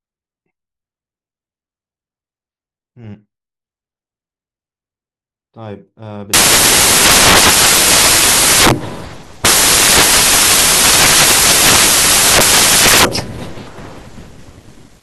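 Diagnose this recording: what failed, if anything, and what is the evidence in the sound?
Samples built from the wrong bytes, at the sample-format conversion stage. The speech is clean until 6.34 s. From there to the end it turns into loud, harsh broadband noise. The reader is assembling each sample from misaligned or swapped bytes. The fast-changing low-order bits land in the high-order position. So every value becomes large and random.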